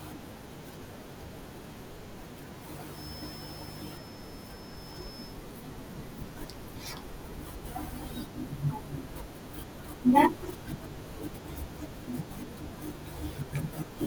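Speech with compressed frames skipped at 4.76, 6.36, 10.52 and 11.86 s: whole 21.3 ms frames never get decoded, so the audio jumps ahead by roughly 100, 150, 70 and 20 ms.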